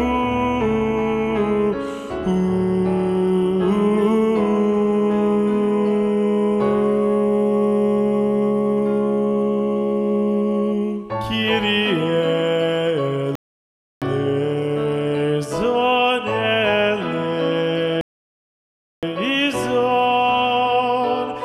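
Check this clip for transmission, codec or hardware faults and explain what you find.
Two rebuffering stalls interrupt the sound. The first runs from 13.35 to 14.02 s, the second from 18.01 to 19.03 s. Each time the player exhausted its downloaded audio and waited. The sound drops to silence, then resumes exactly where it stopped. Nothing is lost, but about 0.66 s and 1.02 s are added.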